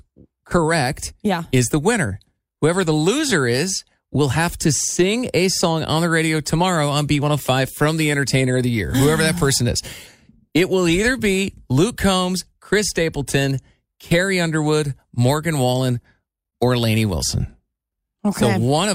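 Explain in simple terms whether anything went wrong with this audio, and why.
Nothing stood out as a problem when listening to this speech recording.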